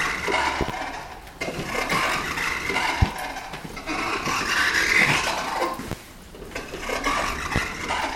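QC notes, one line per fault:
0.61–0.72, 3.02–3.05, 5.92–5.95 and 7.56–7.59 s, loud pop: a double pop in the first span and single pops after, each peaking roughly 15 to 20 dB above the surrounding sound. The likely cause is a voltage step or pulse, perhaps from a plug, switch, static or driver glitch, which the downstream circuits shape. It differs from a dropout or digital click because the sound carries on uninterrupted beneath each thump.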